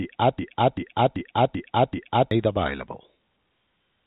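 From the very start until 2.31 s, the speech is caught in a broken-record loop. A 0.39 s fragment repeats exactly, back to back, five times, so the original audio for that span is gone. The likely cause is a stalled stream resending its last buffer. A spectrogram shows identical blocks tiled side by side, band-limited to 3.8 kHz by the telephone coding.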